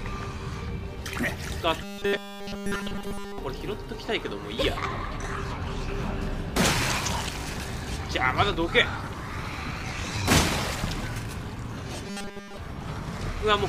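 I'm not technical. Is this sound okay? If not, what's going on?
No. From 1.82 to 3.38 s and 12.07 to 12.57 s, the sound turns into a rigid 200 Hz buzz: robotic sound from repeated short buffers, likely 5 ms chunks looping entirely.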